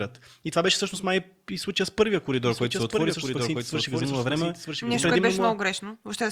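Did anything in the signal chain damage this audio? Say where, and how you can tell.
Yes: a doubled audio track from 2.42 to 5.14 s, just after "и случая с първия". A full-band second copy, about 5 dB quieter and roughly a second behind, starts and stops abruptly with no room colour, likely a duplicate capture path or editing overlap.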